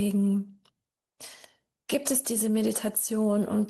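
No technical faults can be heard in this audio.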